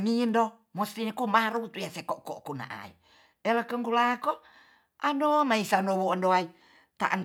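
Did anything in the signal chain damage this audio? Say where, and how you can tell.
Yes. Word clock ticks run through the speech from about 0.29 s to 7.1 s: some fifteen short, sharp clicks at a steady spacing of roughly 0.4 s, unequal in strength. The damage sits at the digital interface between two devices. The receiver was not locked to the sender's clock, and a drift of roughly 50 ppm made one sample slip at each crossing. Buffer underruns leave irregular gaps, but these single-sample ticks keep a metronomic rhythm and only a single sample is dropped or repeated at each one.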